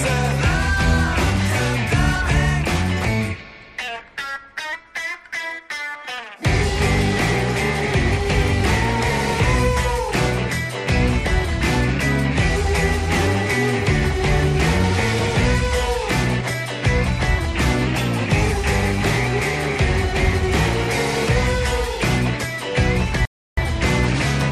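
Drift correction steps occur at 3.88 to 4.73 s, 8.11 to 8.64 s and 17.87 to 18.52 s. The first slows the sound by 6.19% and drops pitch about a semitone (111 cents). The later two speed it up 6.19%, raising pitch about 104 cents, before snapping back. The cause is likely clock-matching software changing playback rate in one jump. A rebuffering stall at 23.25 to 23.58 s cuts to silence for about 320 ms, then resumes exactly where it stopped. The player ran dry, adding time without losing any audio.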